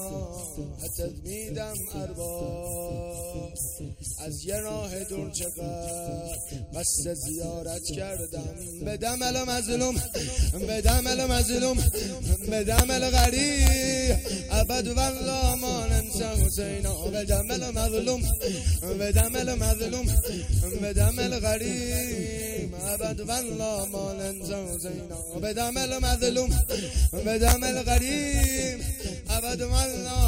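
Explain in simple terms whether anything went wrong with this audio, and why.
Integer overflow cracks at 10.89, 12.79, 13.18 to 13.25, 13.67, 27.48 to 27.53 and 28.44 seconds. The loudest peaks went past the biggest number the system could store and wrapped around to the opposite extreme instead of being capped, producing sharp, violent snaps.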